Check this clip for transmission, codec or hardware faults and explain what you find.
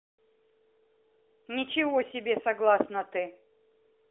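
No transmission, codec or hardware faults can be heard: the speech comes through a normally working AMR narrowband mobile codec path, its band running from roughly 300 Hz to 3.6 kHz with nothing above about 3.7 kHz, and its light coding texture fits the AMR-NB 12.2 kbps mode.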